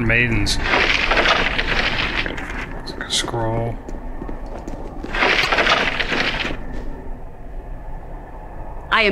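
At 5.40 s a short run of the compressed stream arrives damaged, with bytes lost, zeroed or overwritten, so the decoder can no longer parse the frames it is reading. It misinterprets or discards them, drops out of sync and hunts forward for the next valid frame header before normal decoding resumes at 5.47 s. This damaged data in the compressed stream is heard as a brief chirp, squawk, click or short hole, about 70 ms long, that breaks across the sound.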